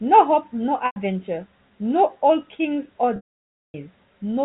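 At 0.86 s (about 0.1 s) and 3.16 to 3.74 s, packet loss with pitch repetition: the last pitch period loops, giving a held buzz, then fading to silence in the longer gap, unlike a plain dropout.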